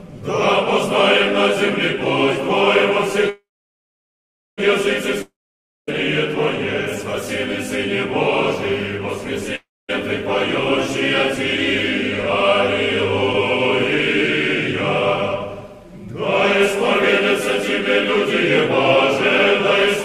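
At 3.29 s the audio stops for a call audio freeze lasting until 4.60 s. The last sound trails on as a fading buzz, then about 1.15 s of silence follows, and playback resumes exactly where it stopped. The likely cause is packets held up in transit, which let the jitter buffer run dry. Nothing is lost, but about 1.28 s of gap is inserted, so everything after it plays later than before. That intact continuation is what separates it from a dropout.

Two long network dropouts follow, from 5.22 to 5.89 s and from 9.55 to 9.90 s. Each begins the same way, with the last sound continued as a decaying hiss, about 0.56 s and 0.24 s of silence respectively. This time the audio returns further along, with about 0.66 s and 0.34 s of material gone. The gaps therefore remove content rather than add delay, which is the likely result of audio never reaching the receiver at all.

At 13.33 to 13.35 s there is a skip ahead. 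Playback jumps forward with almost no audible gap, only a few milliseconds joining the two sides. Roughly a fifth of a second of material is simply absent, dropped while later audio was already queued. Unlike the freeze and dropouts, there is no fading fill or silence, just an abrupt splice where the sound before and after meet almost directly.

From 15.47 to 16.13 s a jitter buffer speed-up makes the audio run at about 111 % of normal pace while the pitch stays put. The receiver trims short pitch-period slices repeatedly to shed excess buffered delay, about 70 ms in total here. The effect is a brief hurried, compressed quality spread over the whole stretch, not a single jump. That gradual squeezing is what distinguishes it from the skip ahead a couple of seconds earlier.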